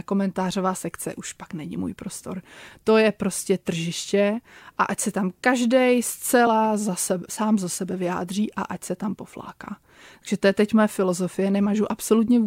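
A speech recording with one glitch: at 6.46 s there's a brief blip where damaged data in the compressed stream made the decoder lose sync and hunt for the next frame.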